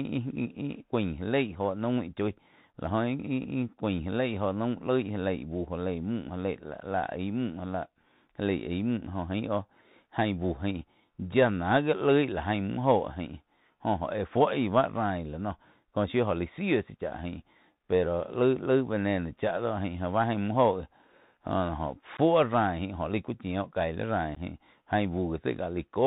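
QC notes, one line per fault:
Throughout, Bluetooth CVSD headset codec: the speech is narrowband and muffled, with a granular hiss beneath it, scratchy s sounds and distortion on loud bright syllables. Nothing above 4 kHz survives, and the one-bit adaptive step can't track fast rises, which fits a 64 kbps CVSD link.
22.17 s and 24.35 s, unconcealed Bluetooth headset packet loss: each is an abrupt hole of about 15 ms, after which the speech returns briefly quieter. A few voice packets dropped between headset and phone and were replaced by silence or an idle pattern rather than concealed.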